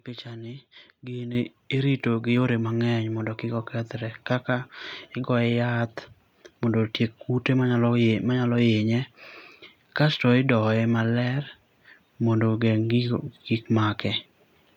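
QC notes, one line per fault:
1.35 s: microphone volume stepped up, about 10 dB in one step, as software raised input gain; voice and background jump together, waveform envelope steps abruptly higher.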